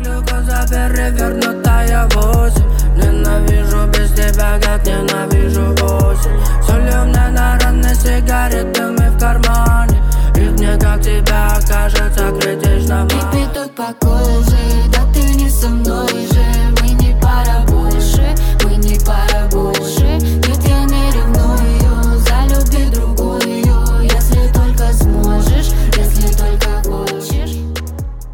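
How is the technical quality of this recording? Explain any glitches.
No technical faults are audible.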